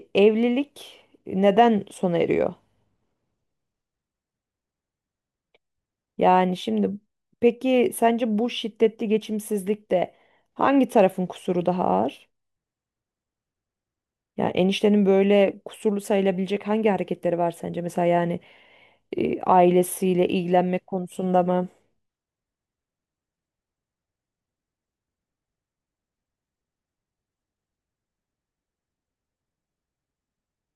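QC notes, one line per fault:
No faults detected in clip.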